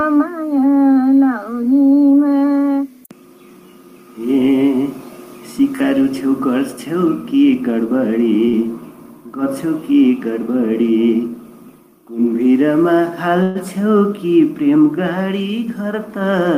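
At 8.48 to 8.56 s there is a short stall from a late packet. The jitter buffer ran dry, and the receiver held the last sound for about 50 ms before resuming where it stopped. On a spectrogram the frequency bands run flat and smeared, and everything after lands 50 ms later.

From 13.43 to 13.58 s the sound freezes into a fading buzz lasting about 123 ms, never dropping to silence, then picks up again with nothing lost. This call audio freeze likely came from packets held up in transit. The waveform shows a decaying, repetitive stretch, and the spectrogram shows a static band.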